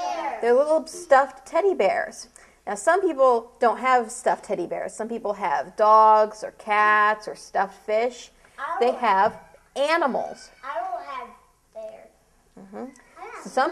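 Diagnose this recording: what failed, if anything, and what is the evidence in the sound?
Nothing failed; no faults heard.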